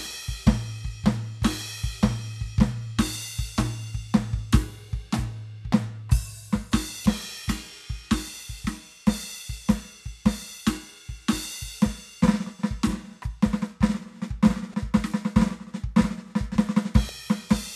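Damaged data in a compressed stream corrupts three short stretches of this music, at 7.03 to 7.06 s, 14.71 to 14.74 s and 17.06 to 17.09 s. Each time, faulty bytes reach the decoder, which misreads the affected frames, loses its place in the stream and must find the next valid frame header before decoding resumes. Each event lasts about 30 ms and sounds like a brief chirp, squawk, click or short hole that breaks into the music.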